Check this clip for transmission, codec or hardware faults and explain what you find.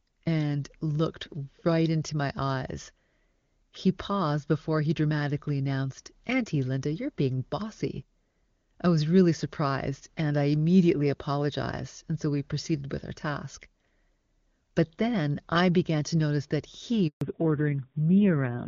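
Two faults appear near the end of this speech clip, a handover gap followed by a fallback to narrowband.

The handover gap runs from 17.07 to 17.21 s and lasts 140 ms. The call was being passed from one network link to another. No speech frames arrived while the switch happened. The voice fades out within a few tens of milliseconds. Then there is silence until the new link comes up. Whatever was said in that window is gone.

The fallback to narrowband starts at 17.21 s and lasts to the end. Up to that point the HD Voice path sounds clean, consistent with AMR-WB at about 23.85 kbit/s. After the gap the call resumes on a narrowband codec. The sound points to AMR-NB at around 5.9 kbit/s. Nothing above 4 kHz survives. The voice loses its airy top and turns muffled. The low bitrate adds a rough, buzzy edge.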